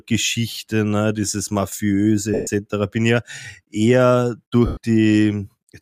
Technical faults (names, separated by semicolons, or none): lost LE Audio frames